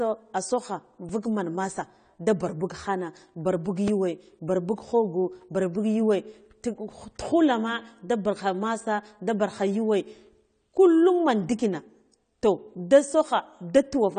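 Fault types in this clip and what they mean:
AAC compression: The speech sounds dull and smeared, with a fizzy, warbling edge on sibilants and nothing above about 9 kHz. The likely cause is a low-bitrate AAC-LC encode, perhaps near 32 kbps. Unlike a plain low-pass filter, it also leaves this swirly texture.
Repeated buffer: A tiny slice of audio, about 2.67 ms long and consistent with a 128-sample buffer, replays with hard joins at 1.09 s before "vuk man masa da" and at 3.88 s after "buk khana bar buk". Unlike a dropout, this comes across as a click or brief buzz rather than silence.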